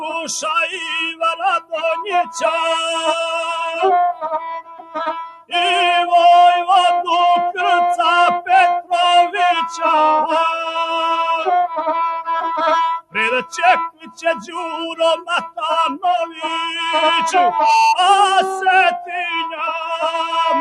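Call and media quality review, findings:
Noise suppressor applied to music or sounds, throughout. Speech-tuned suppressor treating steady tones, ambience and decay as noise; gain swings by around 10 dB, attacks pass while sustained parts sink, so the sound pumps and thins. Probable component: capture-side noise suppression left enabled on non-speech content.

Sound cut by the noise suppressor at 0.00–0.28 s (about 6 dB), 0.74–2.47 s (16 dB), 3.47–3.75 s (4 dB), 4.13–5.53 s (17 dB), 12.99–13.55 s, 13.89–14.57 s, 14.92–15.60 s (each 16 dB), 16.26–16.43 s (7 dB). Held or fading passages misjudged as noise and pulled down; the deepest dips swallow tails.

Loudspeaker feedback squeal at 17.40–17.96 s. Single 895 Hz tone swelling over roughly 0.3 s to some 5 dB above the programme. Mic picking up its own loudspeaker, loop gain above one at that frequency; the tone grows on its own until it stops. 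Probable component: open speaker path without echo cancellation.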